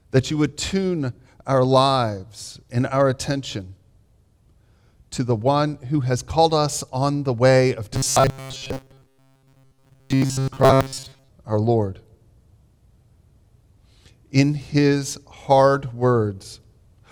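From 7.94 to 11.29 s the sound takes on a rigid, metallic buzz at 134 Hz: robotic sound from repeated short buffers. A segment of about 7.5 ms is likely being replayed while fresh audio is late. Roughly 70% of the audio there is repeats.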